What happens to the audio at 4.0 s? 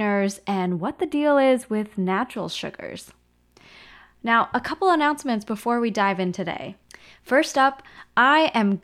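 At 4.0 s the speech carries on cleanly, with no dropout, click, distortion or other fault at that point.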